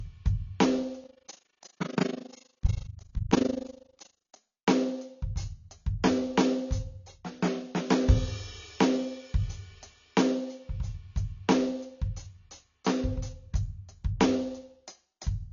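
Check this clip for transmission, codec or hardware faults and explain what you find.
Two faults stand out in this music clip: codec damage throughout, and a level flutter early on.

Throughout the clip the music sounds dull and smeared, with plainly audible codec damage and nothing above 7 kHz. This is likely AAC compression at a low bitrate, around 24 kbps, where the encoder lowers its cut-off and quantises the remaining frequency lines coarsely.

From 1.04 to 4.39 s the level pumps up and down roughly 30 times a second, dipping by about 60 dB, which is heard as a fast, rough tremolo. This is overlap-add ripple: the audio was rebuilt from windowed frames whose overlaps don't sum to a steady gain, so the level swings once per frame.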